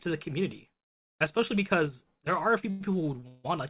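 From 2.70 to 2.82 s, packets were likely held up in transit until the jitter buffer ran dry, a call audio freeze. The receiver carries the last sound on as a fading buzz for about 103 ms, then resumes where it stopped, so nothing is lost but a pause is inserted.

From 3.20 to 3.24 s, a short stall from a late packet stretches the current sound by about 16 ms, which is heard as a brief hold with a slight buzz before the audio continues.

A second freeze follows from 3.28 to 3.46 s, with the same cause and about 158 ms of filled buzz that thins out. It never drops to silence, and nothing is missing afterwards.

The 4 kHz band limit throughout fits the narrowband call codec.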